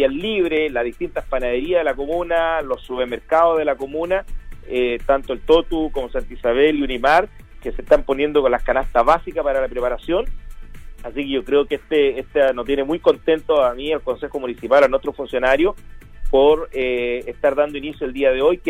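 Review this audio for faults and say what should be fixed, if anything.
A click recurs every 1.08 s from 0.57 s to 17.90 s, around fifteen in all. On a spectrogram these appear as evenly spaced thin vertical broadband lines, and on the waveform as step discontinuities. They are likely clock drift buffer slips: two devices on separate clocks differing by around 150 ppm let the buffer between them creep until a handful of samples is dropped or repeated. Locking both devices to a shared word clock, or adding asynchronous sample-rate conversion between them, would prevent this.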